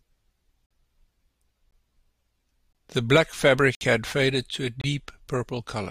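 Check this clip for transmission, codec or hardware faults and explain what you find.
The speech has one fault: a gap between stream segments, heard five times. The holes fall at 0.66 to 0.71 s, 1.71 s, 2.73 to 2.75 s, 3.75 to 3.81 s and 4.81 to 4.84 s, roughly once per second. That spacing fits one-second segments. The timestamps of adjacent segments do not quite meet, so the player pads each join with silence. Each hole has hard edges and lasts about 15 to 61 ms. The longest falls after "black fabric", before "had faded to a". Another follows "had faded to a". Nothing is lost from the speech. It is only pushed later.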